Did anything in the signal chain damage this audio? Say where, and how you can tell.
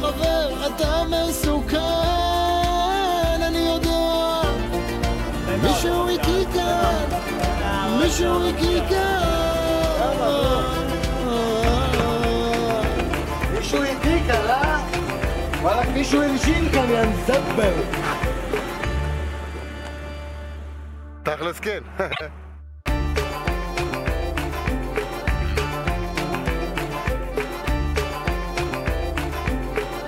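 Yes. Frames out of order at 22.12 to 22.21 s: two adjacent blocks of about 26.1 ms, one frame each, were decoded in swapped order. That stretch plays with its halves exchanged, giving a brief garbled flutter and no lost time. The block length fits compressed codec frames resequenced during network or storage delivery.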